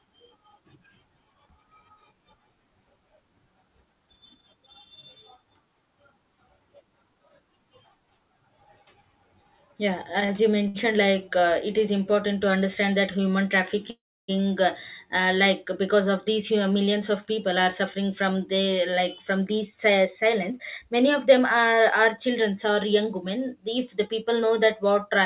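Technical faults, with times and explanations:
10.26–10.31 s and 10.68–10.76 s, short stall from a late packet: each time a packet arrived late, the receiver held the last sound instead of skipping ahead, for about 30 ms and then 65 ms. Nothing is lost, but the sound briefly drags. On a spectrogram the harmonics run flat and smeared for those spans, with a slight level dip in the waveform.
13.90–14.30 s, call audio freeze: after "to understand that human", the sound is extended for about 0.38 s, most of it (about 310 ms) fading into silence, before resuming at "uh uh like because". The likely cause is packets held up in transit, which emptied the jitter buffer. The waveform shows a flat gap, and the spectrogram a blank column cut through the narrowband image, where nothing shows above 4 kHz.
16.39–23.57 s, jitter buffer speed-up: from "uh like because of", the receiver drained its surplus buffered audio by repeatedly cutting out pitch-period-sized slices, running about 5% fast with pitch unchanged and trimming roughly 0.4 s in total. 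It sounds slightly hurried. On a spectrogram the syllables look compressed in time while the harmonic spacing stays the same.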